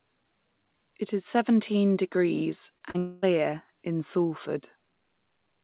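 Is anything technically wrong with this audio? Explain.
Yes, the audio has two kinds of fault, heard as a brief cluster of disturbances between about 2.8 and 3.2 seconds. They come through a phone-band call path whose sound stops at 4 kHz, which fits G.711 A-law coding.

Short concealed packet loss occurs at 2.78 to 2.82 s and again at 2.90 to 2.96 s. Packets arrived too late for the decoder, leaving holes of about 20 ms and then 40 ms. The receiver bridged each gap by extending the preceding sound, for roughly 23 ms and 39 ms, before blending back into real audio. Each is heard as a quick smear or wobble.

A long network dropout follows at 2.98 to 3.24 s, likely caused by packets failing to arrive for about a quarter of a second. The receiver covered the whole 240 ms gap by continuing the last sound rather than falling silent, so the result is a stretched, buzzy or hissy prolongation instead of a clean cut. 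When real audio resumes at 3.24 s, the missing stretch never returns.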